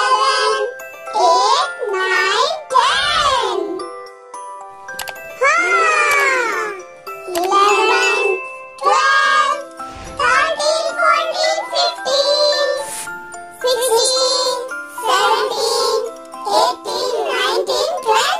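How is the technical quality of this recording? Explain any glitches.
From 14.46 s to the end at 18.40 s, a gritty, inharmonic fizz rides on top of the sound, rising and falling with its louder and brighter parts. The cause is crude rate conversion: samples were simply dropped or repeated to change the rate, with no filtering. The pattern fits a 48 kHz to 44.1 kHz change. That repeating error adds shifted, unrelated copies of the signal, sitting roughly 25 dB below it.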